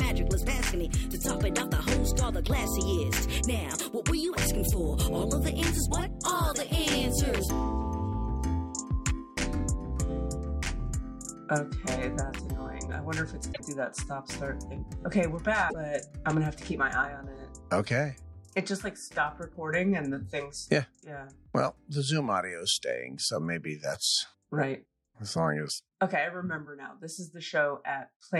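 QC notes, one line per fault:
13.52–13.60 s and 15.69–15.74 s, broken MP3 bit reservoir: frames were likely dropped, so following frames fetched borrowed data from wrong bytes. The audio skips ahead with brief glitches of 82 ms and 56 ms, which fits 26.1 ms MP3 frames.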